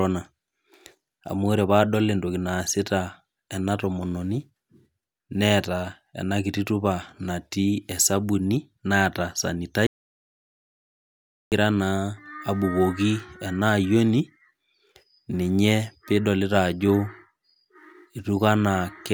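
Speech that cuts out abruptly at 9.87 s and stays in dead, total silence with no room tone until 11.52 s, losing about 1.65 s of audio. This is an audio dropout to silence, likely from the input being lost while the recorder kept writing silence.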